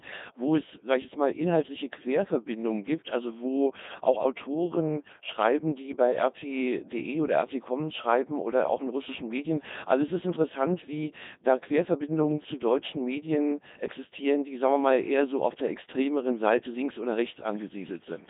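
The speech sounds robotic and buzzy from start to finish, with nothing above 3.8 kHz and a narrow line band of roughly 150 Hz to 3.7 kHz. This is heavy Codec 2 vocoder damage, consistent with about 2.4 kbit/s. Only pitch, voicing, energy and spectral envelope survive, and sine-wave resynthesis replaces the original waveform.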